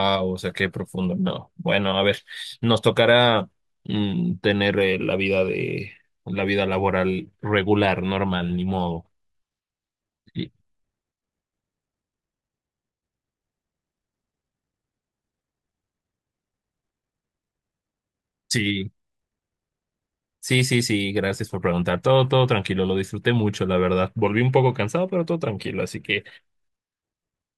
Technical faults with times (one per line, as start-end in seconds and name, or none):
none